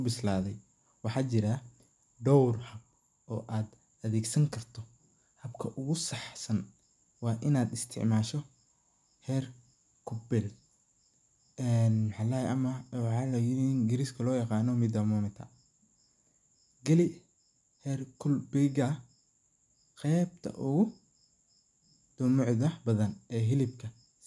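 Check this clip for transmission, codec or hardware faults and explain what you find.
Nothing stood out on listening to the speech here as a transmission, codec or hardware problem.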